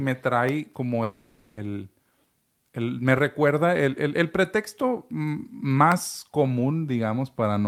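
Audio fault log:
1.03–1.60 s long network dropout: audio likely stopped arriving after "trae como", so the receiver stretched the last sound into a fading buzz for 0.54 s, and that audio never returns.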